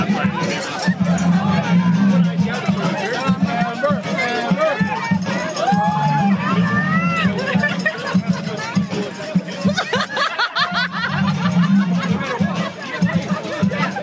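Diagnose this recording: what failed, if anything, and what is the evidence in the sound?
Gain pumping runs throughout. The gain swings by around 10 dB, squashing the dynamics. Likely cause: input gain set far too high, with a fast call-processing limiter clamping each peak. A noise gate would silence the gaps rather than lift them.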